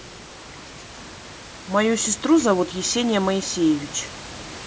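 A speech recording with nothing technically wrong with it, the only background being the room's own noise sitting about 18 dB below the speech.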